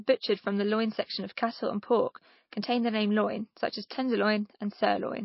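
From start to end the speech carries plainly audible MP3 compression damage, likely from a very low bitrate near 28 kbps. Nothing survives above 5.6 kHz, and weak frequency lines flicker frame to frame, giving a watery swirl that a plain low-pass filter wouldn't produce.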